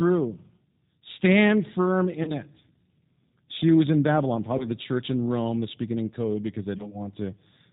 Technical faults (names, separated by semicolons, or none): G.729 codec; VoIP packet loss concealed by the speech codec